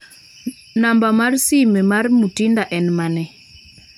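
No audible technical faults turn up anywhere in this speech recording.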